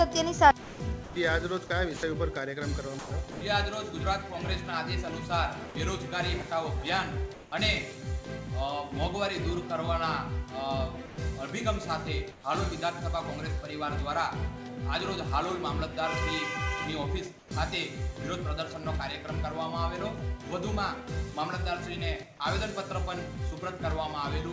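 Between 0.62 and 1.16 s, 1.67 and 2.03 s, and 2.99 and 3.41 s the sound is chopped by the voice detector, likely because the sender's detector kept toggling transmission. Short pieces of about 300, 90 and 210 ms are swapped for synthetic hiss. Unlike a single dropout, each stretch flickers back and forth between real sound and fill.

At 5.69 to 5.75 s the sound is dropped by the voice detector. About 60 ms of quiet sound was likely judged to be background and not sent, so steady noise stands in for it until transmission resumes.

From 7.34 to 7.52 s comfort noise replaces the background, likely generated at the receiver during a transmission pause. The real background, about 23 dB below the loud parts, turns into featureless noise about 2 dB louder. Here only background is covered and no sound is lost.

At 11.06 to 11.18 s a second sound dropped by the voice detector occurs, with 120 ms of sound likely cut and filled with noise.

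Comfort noise in place of the background returns at 12.32 to 12.44 s, about 1 dB quieter, likely from the same pause mechanism. It appears again at 17.39 to 17.51 s, about 4 dB quieter, against a background about 25 dB down. Throughout, the call codec leaves nothing above 8 kHz.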